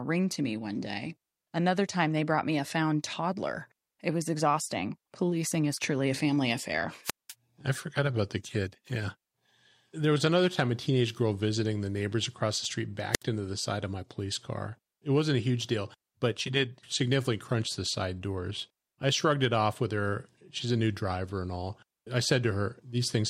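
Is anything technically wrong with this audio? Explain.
Yes, two wireless microphone squelch dropouts. At 7.03–7.34 s, after "truly a family affair", the fading radio signal trips the receiver's squelch: hiss, then a 196 ms mute. At 13.12–13.23 s, after "neighbors across the street", it mutes for 67 ms.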